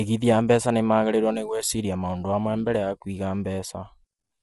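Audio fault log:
throughout, low-delay AAC compression: the speech has a rough, grainy texture, with a hiss-like fill between the pitch harmonics, and nothing remains above 11.7 kHz. The likely cause is an AAC-ELD encode of the kind used in video calls. Its short frames resolve harmonics coarsely, and at a low bitrate the bits run short, so quantisation noise settles into the gaps. The clear damage and the cut-off point to a low rate, around 32 kbps.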